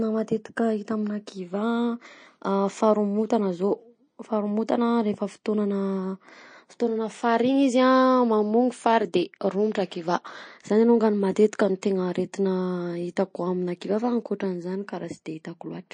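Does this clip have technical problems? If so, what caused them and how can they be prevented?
Yes. Throughout the speech there is a hard ceiling at 9.4 kHz, with nothing above it, and the sound has a watery, swirling quality, with chirpy, metallic edges on s sounds and smeared consonant onsets. This is likely MP3 compression at a starved bitrate, and the damage fits something near 35 kbps. The encoder dropped the treble and let weak frequency lines flicker in and out between frames. A plain low-pass filter would also remove the top end but would leave no swirl. To prevent it, record or export uncompressed, or encode MP3 at 128 kbps or more.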